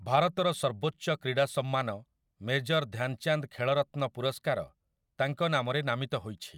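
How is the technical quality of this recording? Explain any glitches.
Nothing here to flag, as the speech recording comes across without any glitches at all.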